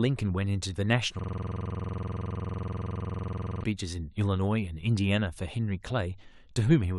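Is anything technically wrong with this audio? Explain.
Yes. From 1.19 to 3.64 s, a system hang loop: a frozen driver replays one 46 ms buffer, producing a rigid 21.5 Hz stutter, identical each cycle, unlike random dropouts.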